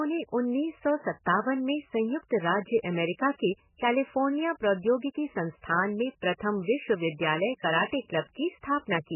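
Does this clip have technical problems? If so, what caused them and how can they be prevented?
Yes. MP3 compression damage runs through the whole speech clip: nothing survives above 3 kHz, and the sound is dull, watery and swirling. The likely cause is an encoder starved of bits, fitting a very low rate near 8 kbps, so it cut the treble and let weak frequency lines flicker between frames. Encoding at a higher bitrate, or keeping a lossless copy, prevents it.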